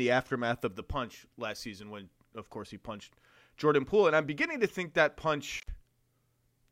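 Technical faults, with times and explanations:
5.58 to 5.68 s, intermittent contact: just after "beginning to think that", a loose connection somewhere in the cable or plug breaks for a moment and the signal path opens for about 82 ms. The speech drops out abruptly rather than fading, with crackle at both edges as the contacts separate and then rejoin. While the line is open faint hiss remains, because nothing from the source reaches the input beyond stray noise.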